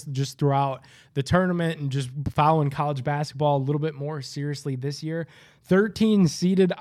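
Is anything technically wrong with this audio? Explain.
No, nothing technically wrong can be heard here.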